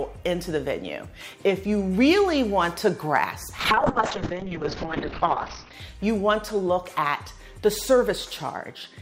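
From 3.59 to 5.79 s the sound abruptly turns dull and rough, with a watery, smeared texture, and everything above 6 kHz disappears before full brightness returns. This is a call bitrate drop: the connection's bandwidth estimate collapsed, so the encoder was forced onto a tiny bit budget for about 2.1 s. The coarse coding and the narrowing from 20 kHz down to 6 kHz point to a fall from around 128 kbps to roughly 9 kbps.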